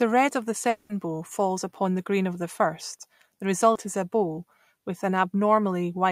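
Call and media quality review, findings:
Long network dropout, likely cause: stream stalled 0.69–0.91 s, roughly 0.2 s of audio never arriving. Symptom: receiver stretches last sound into a fading buzz or hiss for the whole gap, no dead silence, then speech resumes with that stretch missing.

Short concealed packet loss, 3.73–3.77 s: about 20 ms lost before decoding, concealment extrapolated prior signal and crossfaded back. Symptom: brief smear or wobble in speech, possible clipped consonant.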